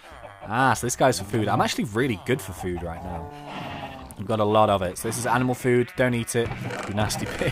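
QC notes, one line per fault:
1.28–1.36 s and 4.06–4.14 s, loose connector crackle: two short bursts, each about 80 ms, where a worn or dirty contact loses and regains the signal many times in quick succession. The chopping and any DC step on the line turn into irregular clicks and scratchy crackle. On a waveform the trace jumps in jagged, uneven steps with sharp spikes. A spectrogram shows clusters of thin vertical broadband streaks at both times.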